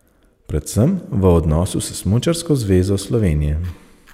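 No technical faults are audible.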